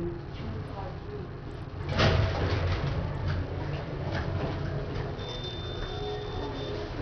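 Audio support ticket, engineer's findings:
Treble dropping out and flickering across the whole clip, with gritty noise and aliasing riding on the sound. Likely Bluetooth SBC compression at a starved bit pool, which fits about 64 kbps. Wide fixed sub-bands losing bits intermittently, unlike a steady low-pass roll-off.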